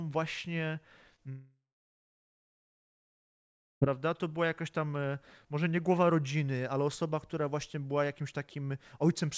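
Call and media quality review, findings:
Short concealed packet loss, 1.16–1.20 s: brief smear where about 20 ms never arrived in time. Jitter buffer/decoder patched the hole by extending the preceding sound, then blended back. Heard as a quick wobble.

Long network dropout, 1.30–3.83 s: about 2.5 s gone. Concealment buzz or hiss fades out within a few tenths, then roughly 2.2 s of near-silence, and audio resumes with that chunk missing. Likely an upstream network stall. Band-limiting to 8 kHz fits G.722 at 64 kbps.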